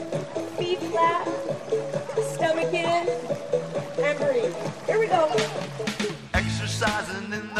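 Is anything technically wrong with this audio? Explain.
No, no technical faults here.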